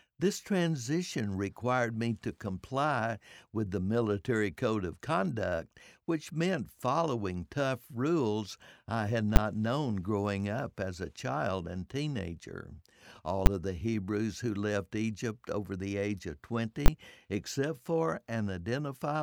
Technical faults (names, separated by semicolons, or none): invalid numbers at full scale